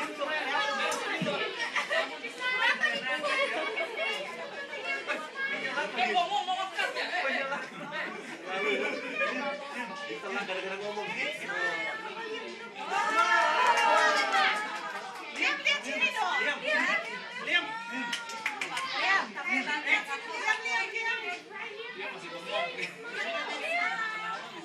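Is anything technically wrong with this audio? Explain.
No, nothing technically wrong can be heard here.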